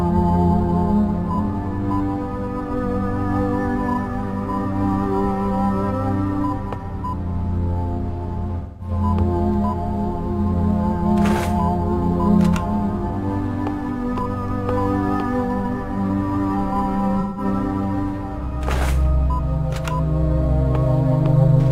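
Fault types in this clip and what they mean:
AAC frame loss with concealment: Three brief patches where the sound turns smeared, hazy and phasey instead of cutting out: about 0.21 s at 8.59 s, a tiny blip of about 0.04 s at 13.07 s, and about 0.17 s at 17.20 s. The lengths fit runs of roughly five, one and four lost AAC frames. With no data for those frames, the decoder patched each gap from the last good spectrum, which left a noisy, blurred smear where the sound should be.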